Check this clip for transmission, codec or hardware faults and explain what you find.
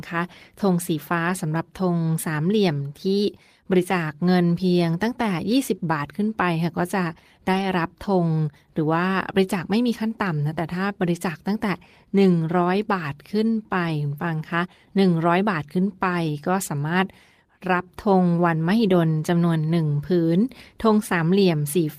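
The speech has one fault type, recurring five times.

Lost packet rebuilt from error correction at 1.29 s, 2.11–2.13 s, 7.53–7.63 s, 13.87–13.89 s and 16.39–16.45 s. Each missing stretch, 20 to 60 ms long, was filled from a low-bitrate backup copy carried in the following packet, so there's no dropout. Those moments just sound briefly rougher and noisier.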